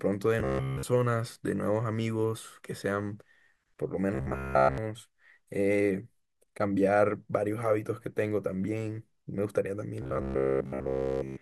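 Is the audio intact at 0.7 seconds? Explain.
No. From 0.40 to 0.83 s there is robotic sound from repeated short buffers: a rigid, metallic 66.8 Hz buzz throughout, likely from one 15 ms chunk looping. Unlike a dropout, it never goes silent.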